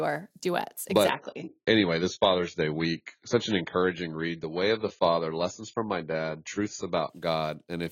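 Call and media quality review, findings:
Dull, swirly speech 1.09 to 7.09 s, nothing above 7 kHz, no gap. Adaptive stream at a lower bitrate, fitting a 16 kbit/s rendition after throughput dropped.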